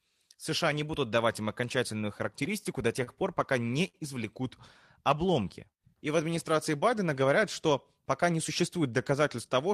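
Speech here passes through a receiver whose jitter buffer struggles in four places. From 1.97 to 3.09 s, between "не будут давать им" and "пор пока", there are scattered short gaps: about seven lost or late packets, each patched by carrying the previous sound forward. Together they cover around 70 ms, none longer than about 30 ms, roughly a small share of that stretch. The result is a string of brief ticks and smears rather than one held sound.

At 3.88 to 3.96 s comes a short stall from a late packet. A single sound is stretched for 57 ms while the buffer sits empty, then speech resumes exactly where it left off, so nothing is lost but the timing slips by 57 ms. It differs from the scattered gaps in being one isolated hold, audible as a slightly buzzy or dipping prolongation, instead of several tiny patches spread across a phrase.

From 5.14 to 6.16 s a jitter buffer slow-down repeats pitch periods and pause fragments to rebuild its reserve. 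It adds 63 ms and brings delivery to 95% speed. Pitch stays unchanged, so the speech sounds drawn out, not lowered. That sets it apart from a stall: the stretching is spread over a second rather than concentrated on one frozen sound.

After "говорят что", from 8.12 to 9.68 s, a jitter buffer speed-up trims short pitch-period pieces to shed surplus delay. Roughly 100 ms disappear and the talker runs at 105% speed with unchanged pitch, sounding slightly hurried. It is the mirror image of the earlier slow-down: material is cut instead of repeated, so the phrase feels compressed rather than drawn out.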